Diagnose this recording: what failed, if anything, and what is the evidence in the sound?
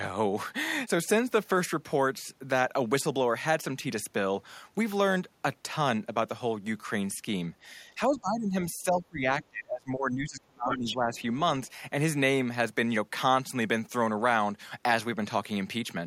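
The speech dips sharply from 8.07 to 8.54 s, by roughly 20 dB, and again through most of 8.84 to 11.16 s, where it sinks by around 25 dB. That is speech suppressed in double talk at the call-processing stage. The echo canceller likely could not tell the local talker from loudspeaker echo while both sides spoke, so it turned the whole microphone signal down.

A second voice appears from 10.7 to 10.95 s at nearly the talker's level, only about 5 dB lower, and again as a faint scrap at 11.15 to 11.22 s, roughly 30 dB down. This is the other side's voice leaking through, also at the call-processing stage. The far end was likely playing on the device's loudspeaker, and the echo canceller failed to fully remove that sound from the microphone pickup during the same double-talk stretch.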